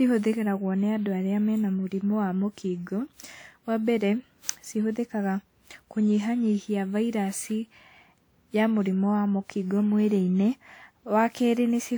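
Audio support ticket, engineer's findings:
Generation loss, throughout. Swirly, hollow speech, blurred attacks; likely repeated WMA re-encoding at 128 kbit/s, about seven passes, each requantising on a shifted frame grid.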